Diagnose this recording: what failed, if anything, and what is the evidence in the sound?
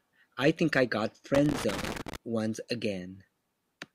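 Loose connector crackle, 1.35 to 2.16 s, in the analogue wiring: a worn or dirty contact intermittently breaks the speech signal, producing an irregular burst of scratchy crackle.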